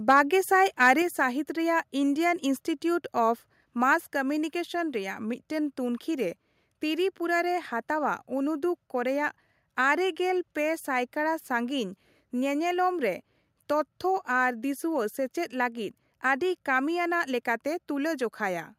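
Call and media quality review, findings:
Microphone overload, 0.1 to 0.2 s and 0.82 to 0.88 s. Harsh, crackly edge on the loudest peaks, signal pushed about 2 dB past full scale, with a couple of percent of samples flat-topped. Likely cause: mic input gain set too high, driving the converter into its ceiling and shearing off the waveform tops.

Microphone volume stepped down, 1.02 s and 4.08 s. Abrupt level drop across voice and background together, about 4 dB at the first step and about 2 dB at the second. The first step follows shortly after the clipped peaks, which points to the call software's input gain control trimming the device level in discrete steps as a likely reaction to the overload.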